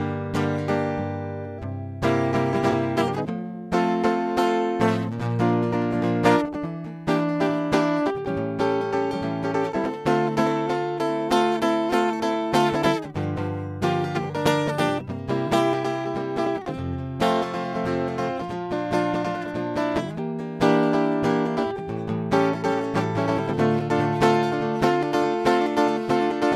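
Around 2.70 to 2.73 s, and again at 15.47 to 15.50 s, the music has a brief concealed stretch, roughly 28 ms long. That's a corrupt frame concealed: some bits in the compressed stream got damaged, the decoder caught it, and it papered over the gap by muting or smearing it. The length fits a single coded frame.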